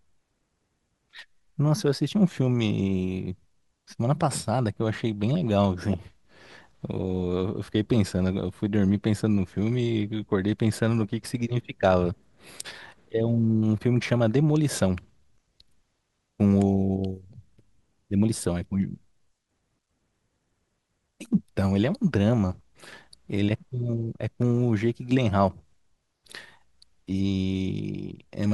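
Speech recording with no audible technical faults.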